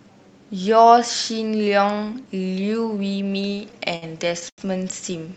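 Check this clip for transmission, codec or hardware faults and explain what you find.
Two transmission faults are audible, both late in the clip. They come from delivery timing, not from the codec, which passes the audio with a top end near 8 kHz.

From 3.55 to 4.04 s the speech drags and stutters through repeated stalls: four brief holds, the longest 60 ms, together about 96 ms or a fifth of that stretch. Packets arrived too slowly, so the jitter buffer kept emptying and the receiver extended the last sound each time. Nothing is lost, only delayed.

From 4.49 to 4.60 s a single sound is held too long, with a faint buzz or dip, for 88 ms. This is a short stall from a late packet. One packet was not ready when due, so the receiver stretched the preceding audio until it arrived, then resumed from the same point.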